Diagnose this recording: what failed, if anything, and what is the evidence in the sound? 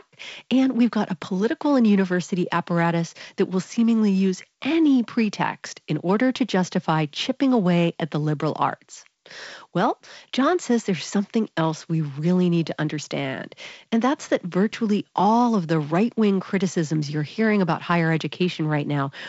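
Nothing in this recording failed.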